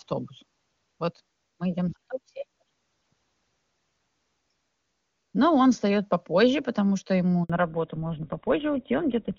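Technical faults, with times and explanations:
7.44 to 7.50 s: handover gap. Just after "попозже потому что ему" the speech dies away and there is a silence of 60 ms. The call is being handed from one network to another. During that switch no speech frames arrive, so the decoder has nothing to play. The sound fades within a few tens of milliseconds and stays silent until the new link is up. Whatever was spoken in that gap is lost.
7.50 s to the end: fallback to narrowband. Before this point the call carries wideband detail up to about 7 kHz, which fits the AMR wideband (HD Voice) codec at its top rate of 23.85 kbit/s. Right after the handover the call drops to an older narrowband codec, consistent with GSM full rate at 13 kbit/s. Nothing above 4 kHz survives from here on. The speech turns duller and rougher. Hiss-like consonants lose their edge.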